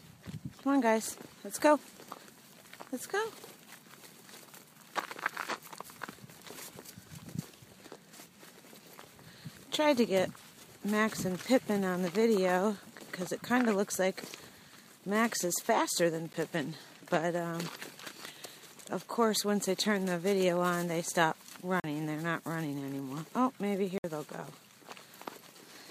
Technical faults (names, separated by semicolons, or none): block of digital silence